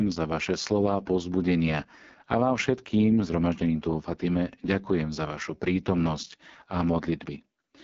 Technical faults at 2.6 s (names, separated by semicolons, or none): AMR wideband (HD Voice) codec